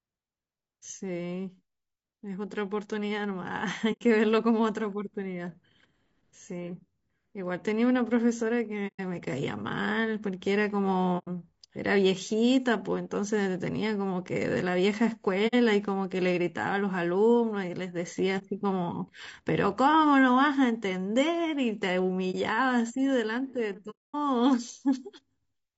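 Throughout, the speech sounds rough and grainy, with noise between harmonics and a synthetic-sounding top band, likely low-delay AAC compression (AAC-ELD), at a rate that fits about 32 kbps. AAC frame loss with muting leaves soft-edged silent holes at 3.92, 8.87, 11.18, 15.47 and 23.90 s and brief dips at 18.38 and 22.31 s, lasting 30 to 240 ms. Unlike a hard dropout, each one fades out and back in.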